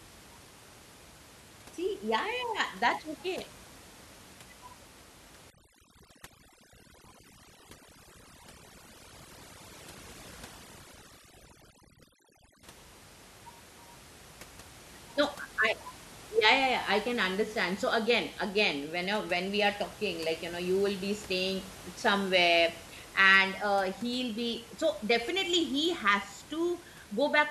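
Overdone noise removal runs from 5.50 to 12.63 s: a noise reducer pushed too hard drives frequency bands near its noise estimate down to nothing, taking the room noise, normally about 21 dB below the speech, with them. Quiet parts of the speech vanish too, leaving near silence with twinkling specks.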